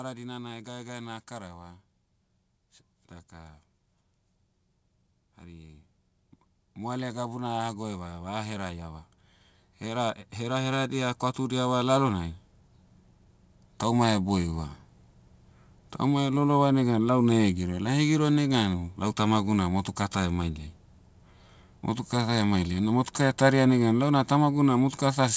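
From 0.63 s to 14.75 s the level climbs by about 18 dB as automatic gain rises, the control boosting an input it judged too quiet. Voice and background noise swell together over that slow stretch, which rules out a talker moving closer to the microphone. Content above 8 kHz is absent throughout, fitting the call codec's band limit.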